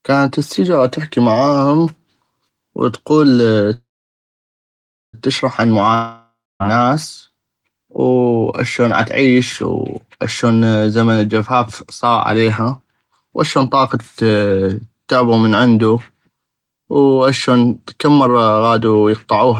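A speech clip with three kinds of fault. From 3.73 to 5.15 s there is a call audio freeze, likely caused by packets held up on the network so that the jitter buffer ran empty. The receiver continues the last sound as a fading buzz, then leaves about 1.3 s of silence, and the speech resumes where it stopped with nothing missing but now about 1.4 s later. From 5.94 to 6.62 s a long network dropout, likely from packets that never arrived, removes about 0.66 s of speech. A fading fill gives way to about 0.28 s of silence before the speech returns further on. To clear the built-up delay the receiver triggers a jitter buffer speed-up, cutting short pitch-period pieces repeatedly. From 13.08 to 14.37 s this runs the speech at 106% speed, removing roughly a tenth of a second, so it sounds slightly hurried at unchanged pitch. Between 19.45 and 19.49 s a brief burst at 210% drops a few hundredths of a second.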